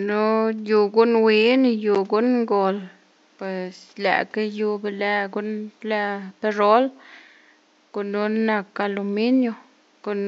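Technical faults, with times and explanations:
No technical faults can be heard anywhere in this recording.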